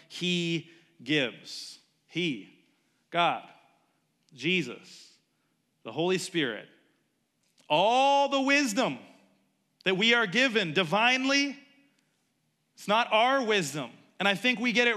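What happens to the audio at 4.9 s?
Nothing goes wrong at 4.9 s; the speech runs on intact through that moment with no dropout, click, distortion or other fault.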